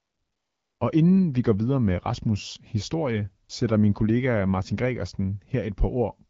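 From 0.00 to 0.79 s, and briefly at 3.47 to 3.49 s before "sætter min kollega", AMR comfort noise replaces the background. No speech frames arrived, so a smooth synthetic hiss fills in.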